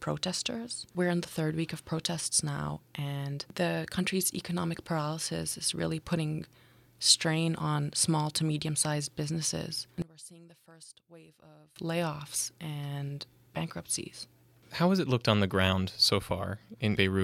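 From 10.02 to 11.76 s the speech suddenly drops by about 24 dB to a faint copy, as if the centre has been scooped out. That's likely one channel inverted: with one side's polarity flipped, the shared centred content cancels when the channels are summed to mono.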